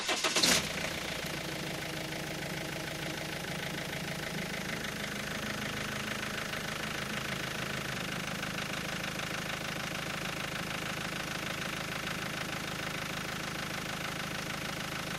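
No technical faults are audible.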